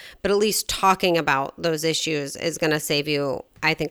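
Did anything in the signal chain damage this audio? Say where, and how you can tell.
No, nothing along the way seems to have damaged this speech clip; there's no stage in the chain that leaves a mark you can hear.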